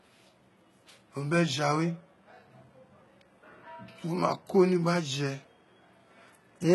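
Speech, likely squeezed through HE-AAC compression at a very low rate, around 16 kbps: its treble is rebuilt from copied lower bands, leaving sibilants gritty, metallic and lispy throughout, with nothing above 11.8 kHz.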